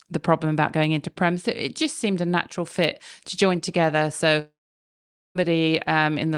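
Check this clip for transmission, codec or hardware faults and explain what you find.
One transmission fault is present. From 4.39 to 5.38 s there is a long network dropout: the last speech sound is stretched into a brief fading buzz, then about 0.84 s of near-silence follows. This likely comes from roughly a second of packets never arriving. The speech resumes later without the missing stretch, which distinguishes it from a brief concealed glitch or a deliberate mute.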